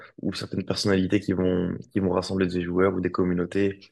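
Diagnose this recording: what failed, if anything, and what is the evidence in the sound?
Listening to the speech in this recording, nothing stood out as a failure at any stage of the chain.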